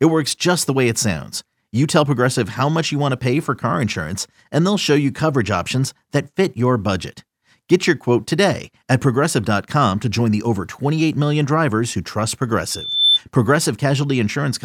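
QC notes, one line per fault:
12.70–13.19 s, loudspeaker feedback squeal: after "million drivers who trust" a 3.5 kHz tone swells within half a second as the mic re-amplifies the speaker, ending slightly louder than the speech.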